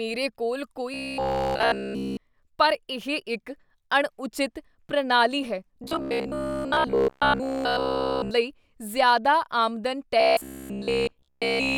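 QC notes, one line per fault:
0.94–2.17 s, 5.84–8.31 s and 10.20 s to the end, robotic sound from repeated short buffers: in all three stretches the speech hardens into a rigid, metallic buzz pitched at 66.8 Hz that only loosely tracks the syllables. All of the audio in each stretch is replaced by repeats. The likely cause is playback starved of fresh data, looping the most recent fragment, roughly 15 ms long, so the repetition rate sets the pitch of the buzz.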